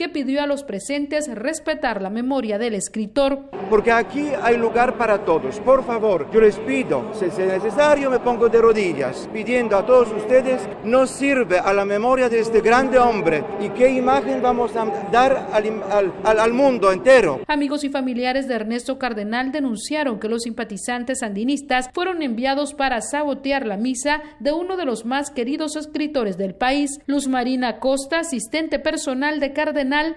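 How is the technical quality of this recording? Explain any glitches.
No glitches turn up anywhere in this recording. Nothing in it calls for an explanation.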